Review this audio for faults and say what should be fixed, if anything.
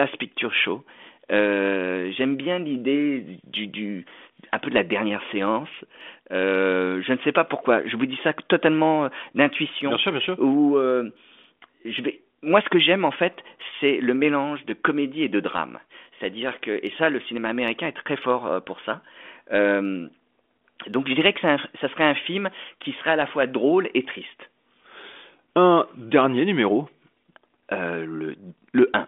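Faint, regular ticks run through the speech from 0.31 s to 28.81 s, roughly every third of a second and around a hundred in all. These are clock slip clicks. Each one is a single dropped or repeated sample, likely from two devices on unsynchronised clocks about 70 ppm apart. Locking both devices to one shared word clock, or putting an asynchronous sample-rate converter at the handover, would prevent them.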